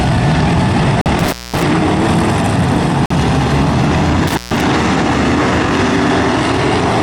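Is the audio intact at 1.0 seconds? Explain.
No. A gap between stream segments cuts the sound from 1.01 to 1.06 s: two one-second segments fail to meet in time, so the player inserts about 45 ms of silence. The waveform drops to a flat line, and the spectrogram shows a hard-edged blank vertical stripe.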